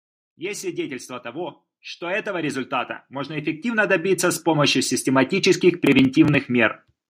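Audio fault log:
0.37 to 4.82 s, automatic gain rising: the speech and the background noise beneath it swell together by about 16 dB over more than four seconds, as an automatic gain control judges the input too quiet and slowly turns itself up. Because the floor climbs in lockstep with the speech, this is a gain stage acting on the whole signal, not a speaker moving closer or raising their voice, which would lift the speech alone.
5.87 to 6.34 s, processor overload crackle: a short burst of gritty tearing rides on the speech for about half a second, then stops. The processor is falling behind on its small audio buffers, which sound to be around 5 ms each, and about seven of them across that stretch are skipped outright, each leaving a tiny hard-edged gap. That clustered, rough texture, confined to one stretch, sets it apart from a single dropout or steady background hiss.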